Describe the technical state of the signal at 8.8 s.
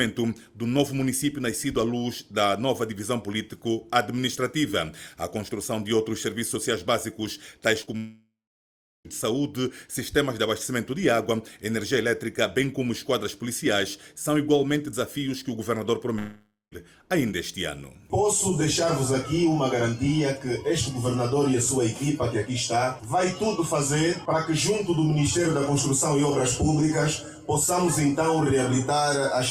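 Silence at 8.8 s: from 7.97 to 9.07 s a brief fading buzz dies to nothing, likely a long network dropout that lost about 1.1 s.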